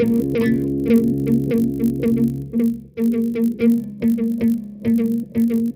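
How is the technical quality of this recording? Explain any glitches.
The technical quality is held back by one fault running through the whole clip: a resampler restarted on every block. The audio seems to have been upsampled in 20 ms chunks during a 24 kHz to 48 kHz conversion, with each chunk processed in isolation. At every chunk boundary the converter lacked the real neighbouring samples, leaving a small error there. Those errors repeat at 50 Hz, so you hear a low buzz riding on the sound whenever there's signal.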